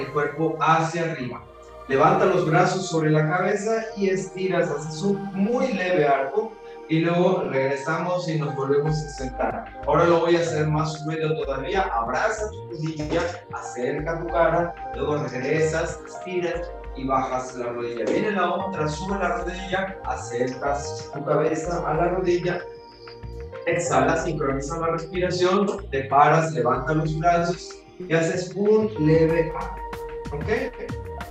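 No technical faults can be heard anywhere in this recording.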